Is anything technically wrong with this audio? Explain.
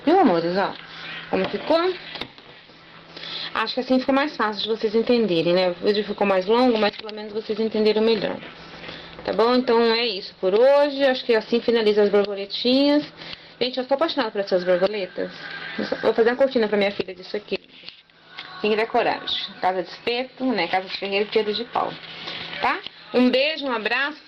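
No, nothing is technically wrong with this audio.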